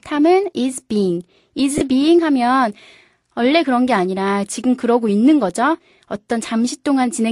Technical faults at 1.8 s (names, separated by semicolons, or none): lost LE Audio frames